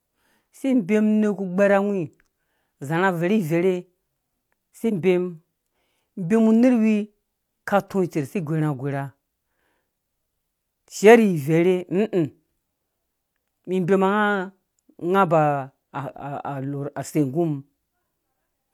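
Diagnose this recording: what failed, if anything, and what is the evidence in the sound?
Nothing failed, and the sound of the recording holds no evidence of a fault.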